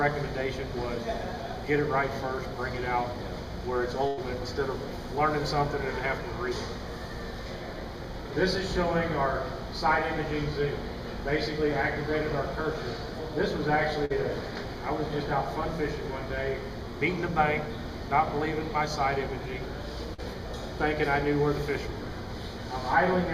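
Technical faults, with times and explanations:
4.07–4.19 s and 14.05–14.12 s, burst of packet loss: consecutive packets arrived too late or not at all, leaving gaps of about 100 ms and 46 ms. The receiver extended the last sound and faded it across each gap, then resumed further on with that stretch missing.
20.14–20.20 s, short concealed packet loss: about 40 ms never reached the decoder in time. The receiver synthesised a continuation of the preceding sound for roughly 43 ms and cross-faded back into the real signal, giving a brief smeared or wobbling patch.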